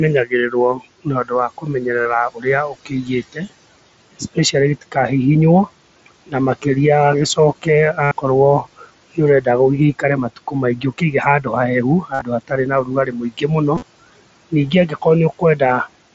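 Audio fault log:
Throughout: noise suppressor artifacts. The suppressor pulls background noise down by about 20 dB in the gaps, then lets it rise back under speech, so the noise floor pumps. A spectrogram shows dark gaps between syllables and speckled, flickering noise beneath each word.
0.25–3.51 s, 4.13–4.96 s, 5.67–6.66 s, 7.35–11.47 s, 12.02–15.87 s: speech cut by the noise suppressor. Quiet consonants and word tails are mistaken for noise and dropped with it, by up to about 22 dB at worst. The first and last spans lose around a second of sound each, the middle ones less. Those sounds come across as swallowed. On a spectrogram, faint high-frequency consonant energy and the fading ends of words vanish early. On the waveform, tails are cut short.
2.01–2.05 s, 8.04–8.12 s, 12.14–12.22 s, 13.75–13.83 s: concealed Bluetooth headset packet loss. Audio from the headset dropped out for 37.5, 75, 67.5 and 52.5 ms. 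The receiver filled each hole by repeating the most recent short stretch of waveform. The longer fills, especially at 8.04 s and in the 52.5 ms run near 12.14 s, come across as a brief buzzy, held tone with a small warble where real sound resumes. On the waveform these show as short stretches of regular repeating cycles at steady level. On a spectrogram they show as frozen harmonic stripes. The mSBC link carrying this audio, with speech up to 8 kHz, shows only light graininess on loud sounds.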